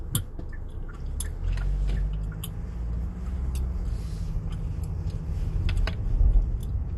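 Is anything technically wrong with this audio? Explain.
Yes. MP2 compression runs throughout: nothing remains above about 12.1 kHz, and the audio is plainly dull with a gurgling, granular texture. The likely cause is MPEG Layer II starved of bits, consistent with roughly 64 kbps, switching off upper sub-bands and coarsely quantising the rest.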